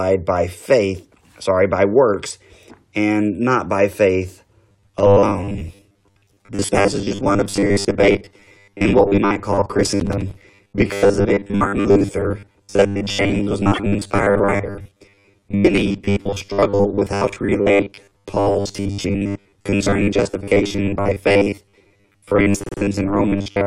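From 4.70 s to the end, the sound takes on a rigid, metallic buzz at 100 Hz that only loosely tracks the original. This is robotic sound from repeated short buffers, likely caused by audio arriving too seldom, so the player loops roughly 10 ms chunks and skips most of the real material.

From 10.00 to 10.42 s, a burst of gritty crackle tears across the buzz. This is processor overload crackle: around ten tiny buffers, consistent with a size of about 5 ms, missed their deadlines over that stretch, and each left a hard-edged gap of silence.

At 13.73 s a brief stutter appears as a single 26.1 ms compressed frame plays twice. These are repeated frames, adding 26.1 ms. From 22.64 to 22.79 s a 52.2 ms block of two frames repeats three extra times, a longer stammer that adds 156.7 ms.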